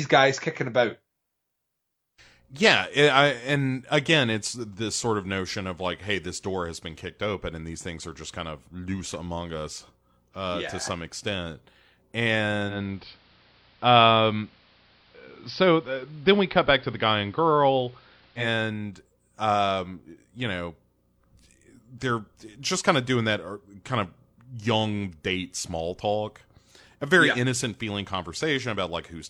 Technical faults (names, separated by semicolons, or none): digital radio blending to analogue